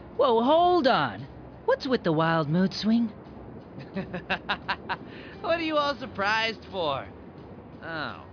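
No technical faults can be heard at any point in the audio.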